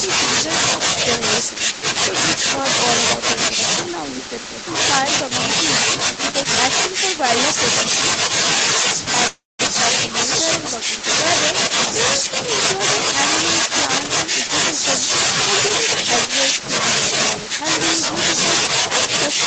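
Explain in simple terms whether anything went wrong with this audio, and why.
A call audio freeze occurs from 9.27 to 9.61 s. The last sound smears into a fading buzz, then goes silent for about 0.19 s, likely because delayed packets left the receiver with nothing to play. Playback then resumes where it stopped, so nothing is lost.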